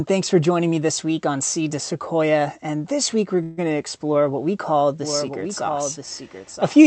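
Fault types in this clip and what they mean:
Call audio freeze: Packets were likely held up and the jitter buffer ran dry, so a fading buzz or hiss fills about 141 ms at 3.43 s before the audio resumes intact.
Doubled audio track: A second copy was likely mixed in from a slower path, so from 5.02 s to the end a dry echo about 5 dB quieter trails roughly a second behind.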